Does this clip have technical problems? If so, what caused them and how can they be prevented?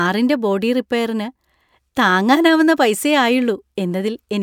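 No, there are no technical problems in this clip.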